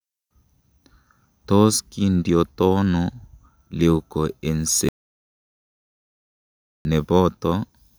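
At 4.89 s the speech cuts to an audio dropout to silence, dead silence with no room tone, until 6.85 s. That's likely a lost input while recording continued.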